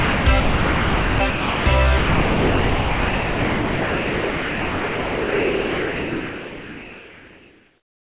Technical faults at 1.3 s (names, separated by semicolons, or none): sound dropped by the voice detector